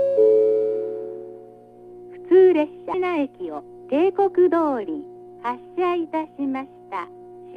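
At 2.93 s the sound jumps forward abruptly, with a small blip at the join and no silence before it. A stretch of material is simply missing, and the likely cause is a stream segment skipped: one chunk of a segmented stream failed to load and the player continued with the next. A plain dropout would leave a silent gap with the surrounding material intact. Here there is no gap, only an instant leap to later material.

From 4.57 s to the end, the pace drops abruptly to about 0.73 times normal speed while the pitch stays where it was. The sound drags, with short pieces repeated to fill the extra length. This is likely a time-stretched section, where software lengthened the audio to fit a duration and preserved pitch by duplicating fragments. A tape-style slowdown would also lower the pitch, which does not happen here.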